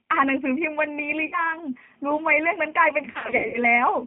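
G.729 codec damage runs throughout. The speech is rebuilt from a vocal tract filter and sparse pitch pulses, fitting an 8 kbit/s stream, so it sounds rough and synthetic and is confined to 150 Hz to 3.4 kHz.

VoIP packet loss concealed by the speech codec occurs from 1.26 to 1.54 s. About 60 ms is missing, consistent with two lost packets. The decoder stretches the last sound into a fading buzzy tone or coloured noise that stays weak after packets return.

The same fault returns more heavily from 3.12 to 3.62 s. About 270 ms is lost in scattered gaps across 420 ms, the longest run 90 ms, so the speech repeatedly dissolves into a decaying buzzy tone or coloured noise.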